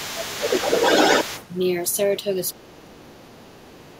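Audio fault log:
0.00–1.46 s, other side's voice leaking through: A second voice sits over the talker, roughly as loud or louder. The likely cause is loudspeaker echo that the echo canceller left in the microphone signal.
0.14–0.40 s, speech suppressed in double talk: The talker's voice briefly dips by roughly 10 dB while the other voice plays. Both sides likely overlapped, so the canceller turned everything down.
2.54 s to the end, speech suppressed in double talk: The talker sinks much deeper, roughly 25 dB down. The canceller likely treated overlapping speech as echo and suppressed it.
3.34–3.57 s and 3.87–3.94 s, other side's voice leaking through: Faint scraps of the other voice surface, far below the talker. They are likely residual echo slipping past the suppression.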